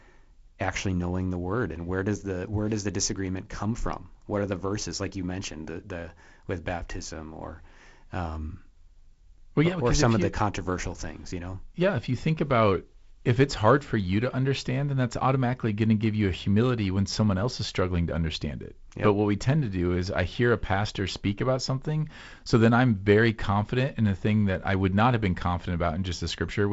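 No faults are present in the speech; it carries the band limit near 7.7 kHz and slight upper-band hiss of G.722 wideband telephone coding, with a grainier lower band that fits the 48 kbit/s mode.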